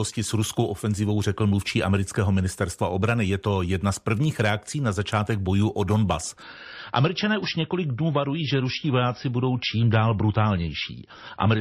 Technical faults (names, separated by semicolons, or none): adaptive stream at a lower bitrate